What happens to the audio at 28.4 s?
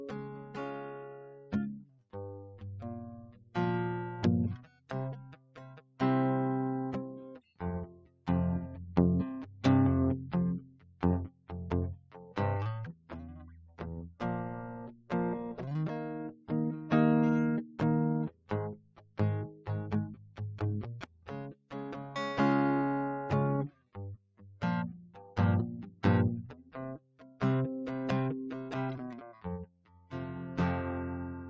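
At 28.4 s, as throughout the music, a speech noise suppressor treats sustained notes and tails as noise and pulls them down by around 20 dB while attacks pass, so the sound pumps and thins. Unlike dropouts, the sound never fully vanishes.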